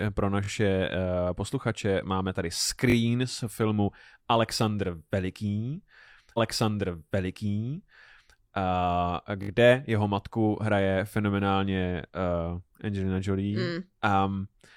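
At 0.44 s there's a repeated buffer: new audio didn't arrive in time, so a tiny slice, which fits a 20 ms buffer, plays twice more with a hard join, giving a quick buzzy stutter. The same happens at 2.90 s between "posluchače máme tady" and "z filmu", and at 9.43 s just before "jeho matku hraje fenomenálně", where the slice repeats three times. In between, at 6.34 s, a stream segment is repeated: the player queued the same chunk twice, so about 2 s of speech plays again through 8.34 s, with a small blip where it jumps back.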